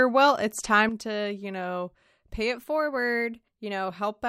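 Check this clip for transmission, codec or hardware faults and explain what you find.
Two faults are audible in the speech.

Sudden gain jump at 0.89 s: the level drops by about 8 dB in a single step and stays down to the end. This is likely a digital gain change applied without a ramp, so the voice and the background noise fall together, abruptly rather than fading.

Drift correction step from 2.55 s to 3.88 s: the audio plays about 6.1% fast and rises by roughly a semitone (102 cents), then snaps back. This is likely clock-matching software jumping the playback rate to drain its buffer, which shifts speed and pitch together.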